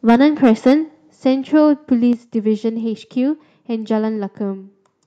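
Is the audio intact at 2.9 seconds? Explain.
Yes, at 2.9 seconds the speech plays through cleanly with no dropout, click, distortion or other break.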